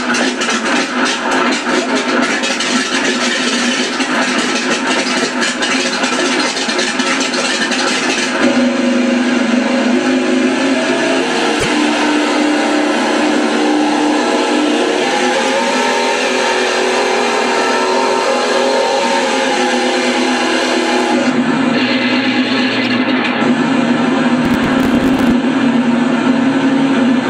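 At 11.56 to 11.66 s, again at 15.47 s and at 22.84 to 22.86 s, there is damaged data in the compressed stream. Corrupted bytes make the decoder misread the affected frames and lose sync, so it skips ahead to the next valid frame header. Each event is a brief disruption in the sound. The 15.47 s event is the shortest.

From 24.45 to 25.31 s there is processor overload crackle. The processor keeps missing its buffer deadlines, which fits buffers of around 10 ms, with a few dozen misses over the stretch. On each miss the output repeats a fragment of old audio with hard edges. Together these produce a gritty tearing crackle laid over the sound for just under a second, ending when the load drops.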